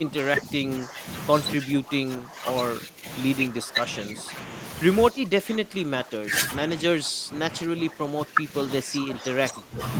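A speech recording with speech suppressed in double talk at 0.0–1.06 s, 1.58–2.47 s, 2.79–3.06 s, 3.49–4.54 s and 5.1–9.8 s. The voice sinks by roughly 10 to 15 dB and thins or breaks into fragments, most likely because an echo canceller, unable to separate it from the far side's loudspeaker echo, turned both down.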